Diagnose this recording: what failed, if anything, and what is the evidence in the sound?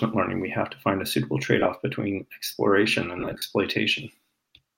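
Lost LE Audio frames over the Bluetooth link: brief noisy smears at 1.59–1.66 s and 3.19–3.42 s, the second with gaps up to about 40 ms. The LC3 decoder is patching each hole by replaying the last spectrum with randomised signs.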